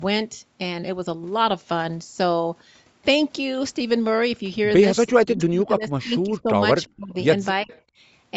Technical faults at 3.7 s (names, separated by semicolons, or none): none